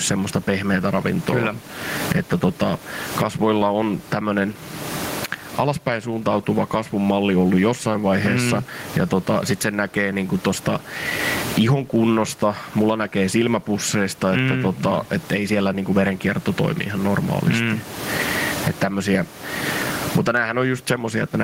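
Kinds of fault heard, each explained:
Gain pumping: The gain of this speech is pulled down under each loud sound, a swing of around 30 dB. The room noise sits about 31 dB below the speech. The likely cause is excessive input gain feeding a fast limiter.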